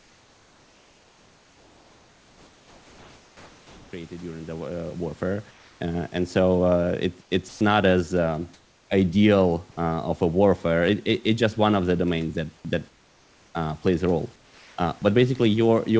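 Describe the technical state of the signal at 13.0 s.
Comfort noise in place of the background runs from 12.89 to 13.55 s, about 0.66 s, between "the domains that that" and "uh plays a role". The room's textured background, roughly 37 dB below the loud parts, gives way to a steady, featureless hiss about 3 dB quieter. The likely cause is discontinuous transmission: the sender stopped sending audio during the pause, and the receiver filled the gap with synthetic noise loosely shaped like the real background.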